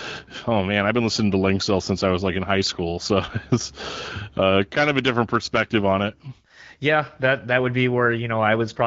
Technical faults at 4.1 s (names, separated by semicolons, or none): none